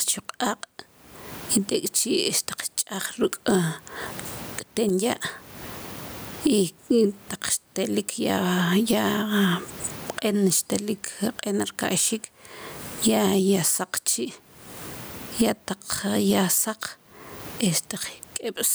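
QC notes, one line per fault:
throughout: gain pumping; gain swings by around 30 dB, squashing loud and soft parts closer in level, likely a fast limiter reacting to excessive mic gain.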